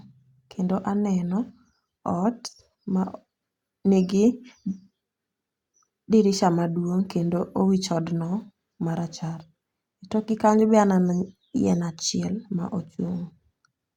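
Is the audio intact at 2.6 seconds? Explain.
Yes, at 2.6 seconds the speech plays through cleanly, with no dropout, click, distortion or other audible fault.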